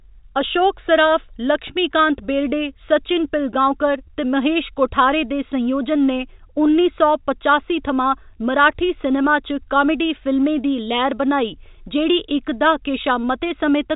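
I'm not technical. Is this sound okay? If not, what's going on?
Yes, the signal is in sound technical shape: it carries the ordinary narrow sound of G.711 telephone coding, which keeps nothing above about 3.8 kHz, and nothing has gone wrong with it.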